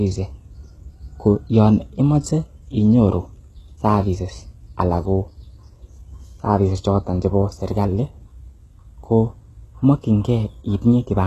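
Throughout this speech, s sounds turn gritty and metallic, the treble sounds synthetic above a dull core and stops near 12.3 kHz, likely from heavily compressed HE-AAC at a very low bitrate.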